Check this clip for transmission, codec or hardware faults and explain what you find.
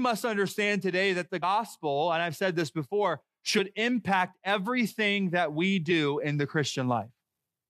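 Compressed frames skipped, at 1.40–1.44 s just after "understand today that the", at 3.55–3.60 s after "I've said this before", and at 5.90–5.93 s after "impact everything that we". Whole coded frames never reached the output, so the speech jumps forward by about 70 ms at the first spot and about 20 ms at the other two.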